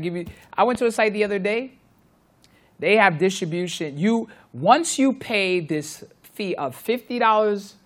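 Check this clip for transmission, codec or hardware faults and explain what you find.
One fault stands out in this speech clip: a loud pop from 0.75 to 0.78 s, between "you I" and "to a site the". It is a single sharp crack, well above the level of the speech, which continues underneath. A sudden voltage spike, likely from a switch, plug contact or static discharge, entered the signal path and was shaped into this brief pulse.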